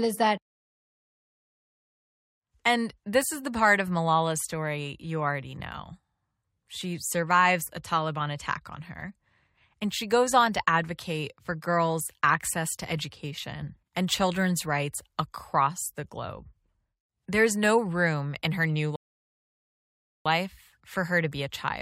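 At 18.96 s, just after "room in her new", the speech drops into silence for about 1.3 seconds, then picks up at 20.26 s exactly where it left off, with nothing skipped or repeated. This is a rebuffering stall: playback used up all the audio it had downloaded and had to wait for more data before continuing. No speech is lost, but the pause adds about 1.3 s to the clip's running time.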